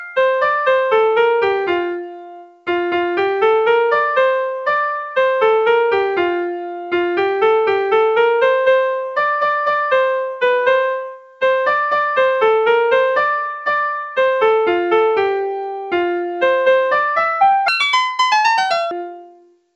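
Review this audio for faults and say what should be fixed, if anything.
Sound cut by the noise suppressor occurs from 2.03 to 2.67 s and from 11.10 to 11.42 s. The suppressor mistook wanted sound for noise and pulled it down by about 13 dB. Steady and decaying parts sink noticeably. Raising the suppressor's threshold or reducing its aggressiveness would prevent this.

A section at the wrong speed runs from 17.68 to 18.91 s. It plays 1.94 times too fast, so pitch rises about ten semitones along with the tempo. The likely cause is an editor or player fitting this part to the wrong clock. Checking clock and sample-rate settings at every stage would prevent it.

The call path, with nothing above 8 kHz, fits a G.722 wideband link.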